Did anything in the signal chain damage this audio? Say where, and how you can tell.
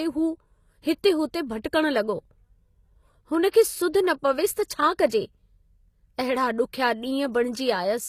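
Yes. At the codec stage, the speech throughout has gritty, lispy treble with nothing above 14.9 kHz, likely from HE-AAC compression; the spectrogram shows copied-looking upper bands, consistent with roughly 24 kbps.

Pre-echo, also from the codec: short hiss smears ahead of attacks at 3.50 s (37 ms), 3.93 s and 4.68 s, seen as low-level waveform noise before each onset.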